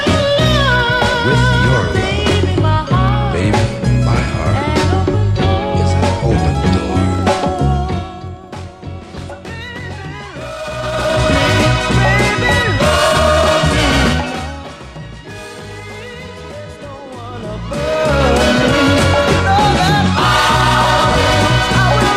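There's zipper noise between 7.72 and 8.32 s, where the level drops by something like 15 dB in 1 dB jumps instead of gliding down. Each jump lands abruptly on the waveform and leaves a tiny click, and at around twenty steps a second those clicks blur into a fine ticking buzz riding on the sound for those 0.6 seconds.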